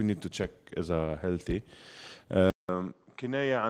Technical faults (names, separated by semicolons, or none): input switched to a poorer device